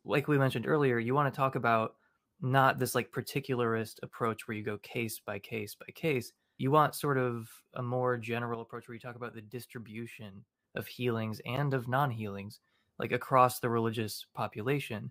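At 8.55 s, right after "a more", the level suddenly drops by about 7 dB, a sudden gain jump. The speech and the background noise fall together in a single sample step, with no ramp at all, and stay down until 10.64 s, where they snap back just before "of healings". That kind of hard step most likely comes from a gain setting or bit shift being applied instantly instead of being faded in.

Just after "of healings", at 11.56 s, there's a block of digital silence about 12 ms long. The audio cuts straight to zero and back with no fade, and at this length it comes across as a quick tick or tiny dropout rather than an audible gap. The length fits a 512-sample buffer that wasn't filled in time, so the output got zeros for one block.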